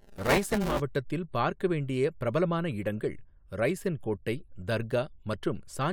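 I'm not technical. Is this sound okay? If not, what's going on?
No. For the first 0.8 seconds, the speech has a robotic buzz, a fast rattle at about 200 times per second, and it clears just before "பார்க்க வேண்டிய பிரபலமான இடங்கள்". This is buffer tearing. The audio program and the sound hardware fell out of step, so each small chunk of audio, about every 5 ms, has roughly a fifth of its sound replaced by sound from about 10 ms earlier. Those abrupt joins make the rattle.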